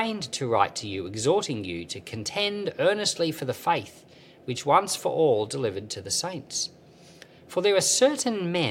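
No technical faults can be heard anywhere in this audio; the signal stays continuous throughout.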